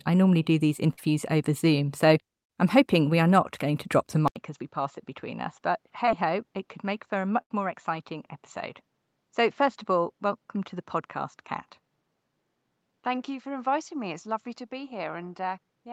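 A recording of speech with three kinds of fault. Short concealed packet loss occurs twice. Around 40 ms of audio failed to arrive after "I normally do these" (0.93–0.99 s), and about 20 ms went missing at 6.05–6.09 s. Each time the decoder extended the preceding sound, leaving a brief smear. At 4.28 s, after "going to drop the", the input likely switched to a poorer device. After an 80 ms silence, nothing remains above 7.4 kHz, the level sits about 5 dB lower, and a new noise floor appears roughly 45 dB down. A burst of packet loss at 7.41–7.52 s removes about 100 ms, which is concealed as a fading held sound before the speech resumes further on.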